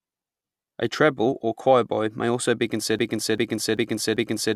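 At 2.99 s, right after "choirboy may also be", a broken-record loop takes over: a 0.39 s fragment repeats exactly four times to the end, likely from a stalled stream resending its last buffer. Spectrogram and waveform show identical blocks tiled back to back.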